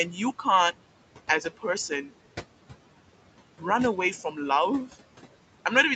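Across the whole clip the background sinks in the pauses and swells back under the speech. These are noise suppressor artifacts: the room noise, sitting about 15 dB below the speech, is pulled down by about 18 dB frame by frame wherever the suppressor judges a band to be steady noise.

From 4.23 to 4.38 s a stretch of speech turns faint and swallowed. This is speech cut by the noise suppressor. It mistook around a tenth of a second of quiet speech for background and turned it down by up to about 9 dB.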